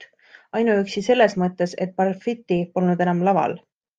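Listening to the speech in this clip, nothing stood out as a technical fault at any point.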